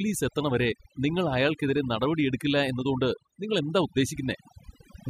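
A speech clip with overdone noise removal throughout. The noise reduction was set too strong. Quiet frequency bands near its noise estimate are pulled down or cut away. The background drops and breaks up into twinkling specks.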